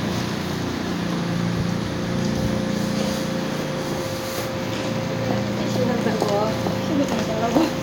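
No technical faults turn up anywhere in this recording, so there is nothing to describe in time order.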